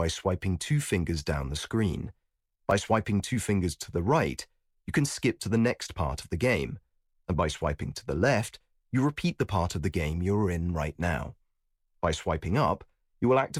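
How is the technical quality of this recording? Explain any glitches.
Two brief repeated-buffer glitches break the speech, at 2.71 s between "fingers down the screen" and "swiping two fingers to", and at 9.93 s just before "you're in right now". Each time new audio arrived late, so a 2.67 ms piece, fitting a 128-sample buffer, played twice more and about 5 ms of sound was lost. With a buffer this small, the hard-joined repeats come across as a click or brief buzz.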